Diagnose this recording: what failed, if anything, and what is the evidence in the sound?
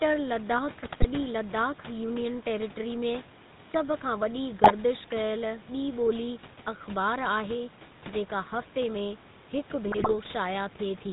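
The speech has a buzzy, gravelly roughness throughout, and nothing above 4 kHz remains. This is the GSM full-rate codec at the codec stage. It models the vocal tract and drives it with a sparse, regular pulse excitation, which fits a 13 kbit/s full-rate coder.

Squawks, pops and gargling break into the audio at 0.83–1.06 s, 4.64–4.72 s and 9.86–10.13 s. These are GSM bit errors on the network link. Corrupted filter, pitch and gain values distort the spectrum and level of each damaged frame, and the room noise sits about 21 dB below the speech.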